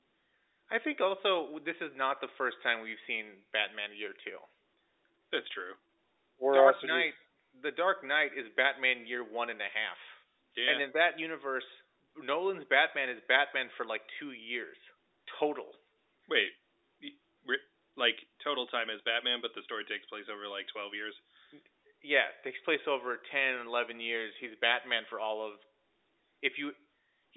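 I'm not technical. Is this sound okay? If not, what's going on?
Yes, no faults heard.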